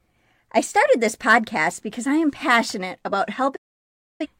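A speech clip with a digital broadcast dropout: after "I am passionate about", the sound fades to silence within 8 ms at 3.56 s and returns at 4.26 s. The receiver muted on lost or corrupted frames, so 640 ms of programme is simply gone, unlike concealment, which would fill the gap.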